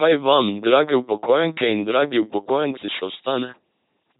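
From start to finish the speech runs through an LPC-10 vocoder, and the damage is heavy. Each stretch of sound is rebuilt from a short all-pole filter excited by either a pulse train or noise, so the voice comes out buzzing and mechanical, with hiss or buzz where the voiced/unvoiced choice goes wrong. Nothing survives above 3.8 kHz. The coarse, robotic quality fits a 2.4 kbit/s LPC-10 coder.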